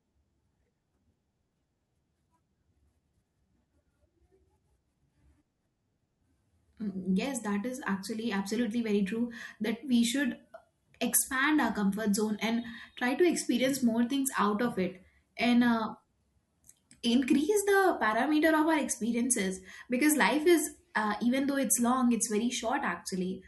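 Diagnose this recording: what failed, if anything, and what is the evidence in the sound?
Nothing stood out on listening to this speech recording that would point to a failure at any stage of the chain.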